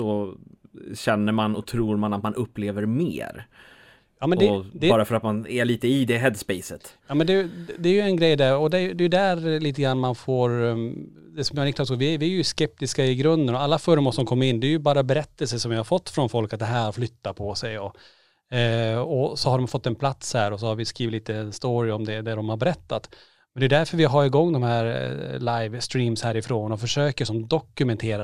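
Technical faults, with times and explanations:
No technical faults can be heard anywhere in this speech.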